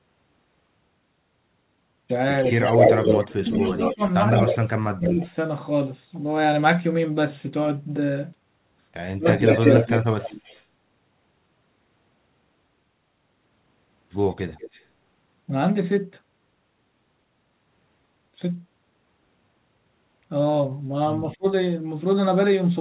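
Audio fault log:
2.41 to 4.58 s, 5.07 to 5.32 s, 9.31 to 10.66 s and 14.31 to 14.85 s: echo leak. A distinct second copy of the speech trails the original by 160 to 183 ms, likely loudspeaker sound the far-end echo canceller failed to remove. The copy is about as loud as the speech in the first and third stretches, and about 20 dB and 15 dB down in the second and fourth. Reverberation would give a smeared tail, but this is a separate, recognisable repeat.
2.69 to 5.27 s, 9.17 to 9.89 s and 21.36 to 21.45 s: speech suppressed in double talk. The speech dips in pieces, by roughly 25 dB, 15 dB and 25 dB at the deepest, for about a second and a half, half a second and a tenth of a second. The likely cause is an echo canceller turning everything down while both sides talk at once. These are level drops that coincide with overlapping talk, not clean silent gaps like packet dropouts.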